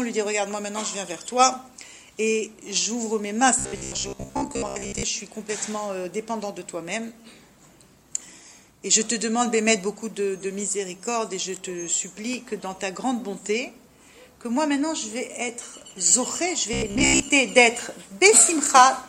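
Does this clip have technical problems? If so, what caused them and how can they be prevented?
Yes. Robotic sound from repeated short buffers, 3.59–5.03 s and 16.73–17.29 s: a rigid 66.7 Hz buzz, likely from repeating about 15 ms blocks. Larger buffers prevent it.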